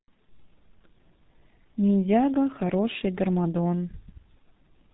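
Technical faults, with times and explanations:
Throughout, G.723.1 codec. Nothing passes above 3.8 kHz, so the speech sounds muffled and hoarse. The codec squeezes speech into 30 ms frames at a very low rate, which fits about 6 kbit/s. Its slow voice model smears consonants heavily.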